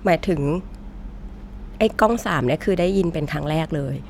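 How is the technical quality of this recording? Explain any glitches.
No glitches or faults heard.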